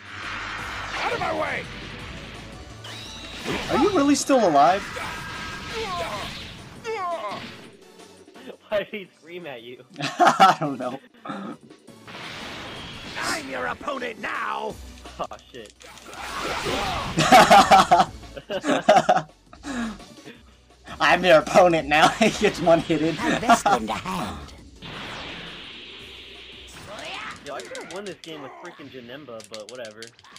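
At 27.49 s the audio jumps forward slightly. Compressed frames were skipped here. The decoder either never received this stretch of the stream or rejected it as corrupt. About 20 ms of audio goes missing. That gap fits the loss of a single frame of about 23.2 ms.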